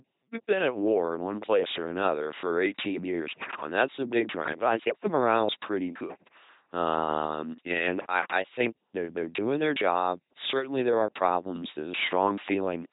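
Speech run through an LPC-10 vocoder from start to finish turns every voice sound into a buzzy, robotic synthetic tone, with hiss wherever voicing is misjudged. Nothing sounds above 3.8 kHz. Unlike ordinary low-bitrate codec smearing, each instant is all buzz or all noise, which fits a 2.4 kbit/s stream.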